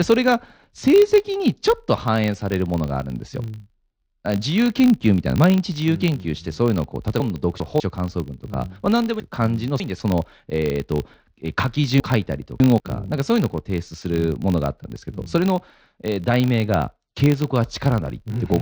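A speech recording runs with a steady buzz at 50 Hz throughout, the signature of a filter restarted on every block: the filter drops its internal state at each block boundary and starts again from silence, so each block opens with a tiny transient. A 50 Hz tick rate fits blocks of about 20 ms. On a waveform these show as small regularly spaced spikes, and a spectrogram shows faint vertical lines at even spacing, stronger where the speech is loud and fading in pauses. Separately, chunks out of order garble the speech at 7.2 to 7.8 s, 9.2 to 10.0 s and 12.0 to 12.8 s. A 200 ms chunk plays late, two chunks behind at 7.2 s and three behind at the other two places, so nothing is lost but the sequence jumps and each stretch has three hard joins. The spectrogram shows abrupt breaks in the speech contours at those joins, and the waveform shows sudden steps.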